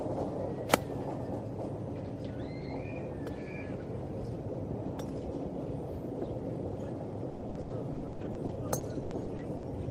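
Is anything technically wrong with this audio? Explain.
Yes. From 7.29 to 9.65 s there is repeated packet loss, giving a robotic sound. Fifteen dropouts occur, the longest 120 ms. Each is patched by extending the previous sound, covering about 30% of the stretch. The result is choppy, with pieces missing.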